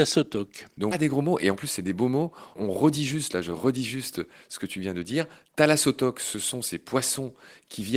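At 0.91 to 0.93 s a skip ahead occurs: a stretch of speech was dropped while later audio was already queued, so playback jumps forward with no gap filled. Roughly 0.7 s of speech is missing, and the two sides of the cut join almost directly.

From 1.01 to 2.23 s a jitter buffer speed-up follows. The buffer held more audio than its target, so the receiver repeatedly trimmed short pitch-period pieces, removing about a tenth of a second in total. The speech runs at about 109% speed, sounding hurried at an unchanged pitch.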